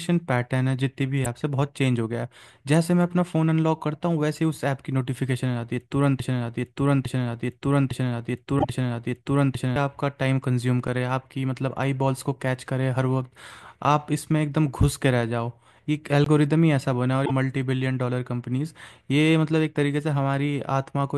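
At 1.21 to 1.26 s a short glitch breaks through the speech. This is damaged data in a compressed stream. Corrupted bytes made the decoder misread a frame, lose its place, and jump to the next valid frame header.

From 6.2 s to about 9.76 s, one fragment of about 0.86 s plays four times back to back, identically each pass. This is a broken-record loop. The likely cause is that the decoder or stream stalled and kept resending the last chunk it held. Whatever speech belonged in those seconds is gone.

Inside that loop, at 8.56 to 8.65 s, another glitch marks a second patch of damaged data. The frame there was unreadable and the decoder had to resynchronise. The same fault returns at 17.22 to 17.31 s as a blip of roughly 90 ms.

At 10.88 s there is a sharp tick. Here the signal drops to a block of digital silence only about 5 ms long, and the abrupt, unfaded edges make the click. A longer block of digital silence follows at 16.24 to 16.26 s. 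It lasts about 20 ms, long enough to be heard as a tiny hole. In both cases the output buffer was filled with zeros, most plausibly because audio wasn't delivered in time.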